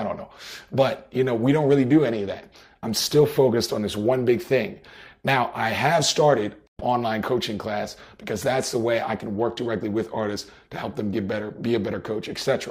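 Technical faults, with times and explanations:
6.67–6.81 s, stream reconnect: the audio drops out for about 117 ms, then picks up again at a later point, with something like 150 ms of material simply skipped. That's what you get when the connection breaks and the player reconnects and spins up a fresh decoder mid-stream. It doesn't rewind to where it stopped, it joins wherever the stream has got to, so you hear a short silence followed by a jump forward.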